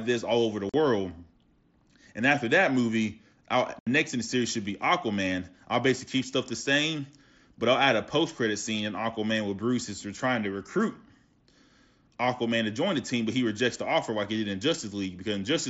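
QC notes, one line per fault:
0.69–0.74 s and 3.79–3.87 s, unconcealed Bluetooth headset packet loss: sharp-edged gaps of 45 ms after "this all over the" and 75 ms between "after that movie I'll" and "next in the series". Lost headset-to-phone voice packets on this mSBC link became silence or an idle pattern instead of being concealed.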